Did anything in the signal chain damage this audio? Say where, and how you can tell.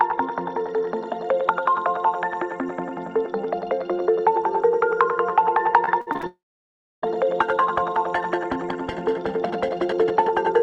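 Yes. The network stage broke this audio twice. From 5.85 to 6.25 s there is repeated packet loss, heard as a robotic sound: five short holes, the longest about 53 ms, each patched by repeating the last sound. About a third of that span is filler. These are separate chops, not one continuous gap, and that is what sets them apart from a dropout.

Right after, from 6.27 to 7.04 s, comes a long network dropout. About 0.76 s of audio is lost, most likely because delivery stalled. A brief continuation of the last sound fades, then about 0.65 s of near-silence follows before the sound resumes with that portion missing. A converter or buffer fault would not sound like this.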